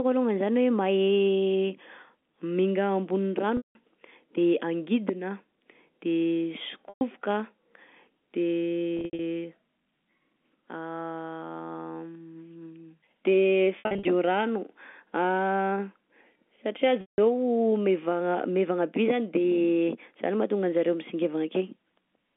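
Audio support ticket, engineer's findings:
Packet loss with pitch repetition: pitch-repeated gaps fading into silence at 3.57, 6.89, 8.97, 13.79 and 17.01 s, roughly 120 to 190 ms each. The third and fourth are scattered dropouts. Concealment loops the final pitch period over each gap, on a clean 150 Hz to 3.5 kHz G.711 line.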